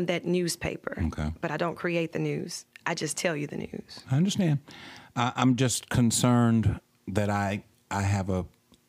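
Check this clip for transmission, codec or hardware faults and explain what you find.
Nothing in the signal points to a transmission, codec or hardware problem; the speech arrives continuous and stable, with no disturbance that would trace back to the path it travelled or the equipment that handled it.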